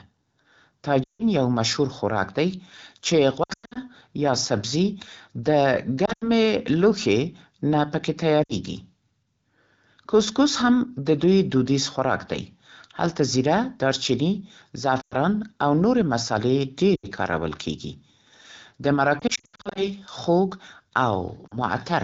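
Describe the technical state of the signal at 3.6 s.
Lost AMR speech frames affect 3.6 s, within a damaged stretch from 3.43 to 3.78 s. About 240 ms of audio is missing across those 320 ms, which fits roughly a dozen 20 ms frames dropped after failing their checksum. For each gap, the decoder repeats the last good pitch and vocal-tract settings at falling gain. The sound dips and warbles, and the longest run of 100 ms fades toward silence quickly, as wideband does. The AMR-WB codec at 12.65 kbit/s around it sounds clear, with only light coding damage.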